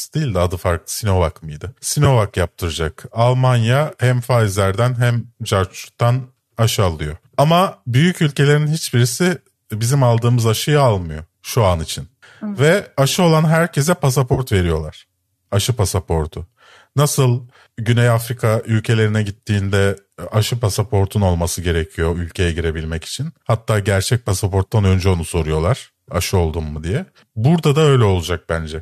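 AAC frame loss with concealment occurs at 2.05 s and again from 14.34 to 14.41 s. In both places compressed audio frames went missing, and the decoder rebuilt the gap by reusing the last good spectrum. The first dropout is about 10 ms and is heard as a brief smeared, phasey flick. The second is about 40 ms, long enough to sound like a noisy, washed-out patch. Its length fits several short frames of the kind a low-delay AAC stream likely uses.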